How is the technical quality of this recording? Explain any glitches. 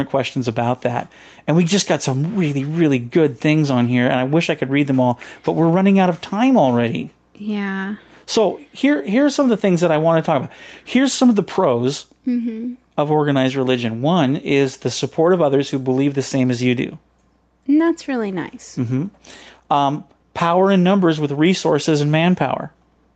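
The recording has one fault: gain pumping throughout the speech. Its top end stops around 8 kHz, which fits a wideband call codec. Across the whole clip the gain swings by roughly 5 dB, pulled down whenever the speech gets loud. The likely cause is gain set too high ahead of a fast limiter that clamps down on every peak and then releases. Unlike a noise gate, pumping does not cut the quiet parts to silence; it moves the level up and down.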